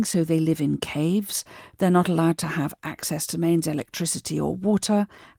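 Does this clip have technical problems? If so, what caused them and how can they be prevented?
No, there's nothing technically wrong to hear in this recording, so there's nothing to trace back or guard against.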